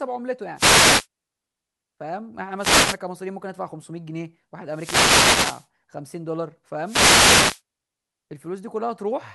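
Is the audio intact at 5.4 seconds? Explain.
No. From 4.71 to 5.67 s the speech is hit by a wireless microphone noise hit: the FM radio link fades as reflections cancel, so receiver noise swells into a swish of static. On a spectrogram this shows as a broadband noise band; the waveform thickens with hiss.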